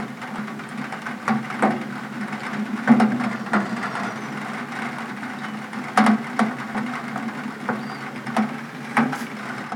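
Damaged data in the compressed stream at 0.37 s: the decoder loses frame sync on bad bytes and searches for the next frame header, leaving a brief glitch. The same blip recurs at 3.11 s. From 3.26 to 4.17 s, a drift correction step slows playback by 6.1% and drops pitch about 110 cents, roughly a semitone flat, before it snaps back, likely from clock-matching software refilling or draining its buffer. Another glitch from corrupted frames arrives at 6.74 s. From 8.50 to 9.33 s, the rate jumps 6.1% faster and pitch rises about 103 cents before returning, likely another step from the clock-matching software.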